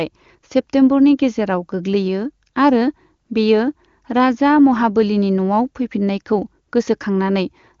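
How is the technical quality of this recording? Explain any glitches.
No glitches to report: the speech has the band-limited character of AMR wideband (HD Voice) coding, with nothing above 7.1 kHz and at most faint coding damage, which fits the codec's top rate of 23.85 kbit/s.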